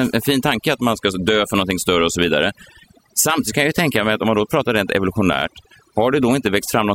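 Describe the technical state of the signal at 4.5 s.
At 4.5 s the speech carries overdone noise removal, present across the whole clip. Bands near the estimated noise floor are gated hard, leaving a lowered background that breaks up into twinkling specks. A spectrogram shows a patchy, holed floor with isolated bright dots.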